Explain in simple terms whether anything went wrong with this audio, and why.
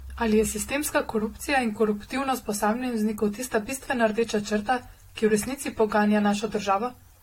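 Generation loss: the speech was likely squeezed with a lossy audio codec, unpacked, and squeezed again about four times. Each round adds fresh damage, so from start to finish the voice sounds swirly, hollow and smeared, consonants lose their crispness, and nothing above 16.6 kHz remains.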